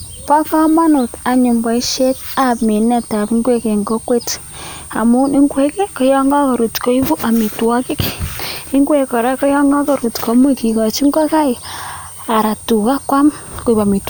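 From start to end, a thin high whistle sits roughly 20 dB under the speech, its pitch wandering between about 8.7 and 9.0 kHz. This is switching supply whistle: a power supply switching at an audible rate, its frequency shifting as the load changes.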